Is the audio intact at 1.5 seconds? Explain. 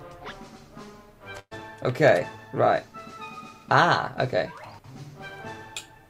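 No. At 1.5 seconds the sound falls inside a burst of packet loss running from 1.39 to 1.53 s. About 120 ms of audio never arrived, so the receiver stretched the last sound it had for about 117 ms and faded it down, leaving that sound held and fading, and then roughly 50 ms of silence. On a spectrogram this shows as a smeared continuation of the last sound thinning to a blank strip. The waveform shows a decaying envelope.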